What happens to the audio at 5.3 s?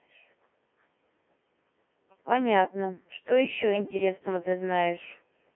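At 5.3 s the speech is still passing through the Codec 2 vocoder, as it does for the whole clip. Only pitch, voicing, energy and a spectral envelope survive. Sine-wave resynthesis makes it robotic and buzzy, confined to 200 Hz–3.4 kHz, consistent with a 1.3 kbit/s mode.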